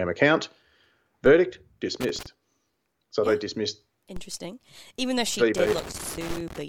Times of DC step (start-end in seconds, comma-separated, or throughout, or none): 1.26, 4.16, 6.30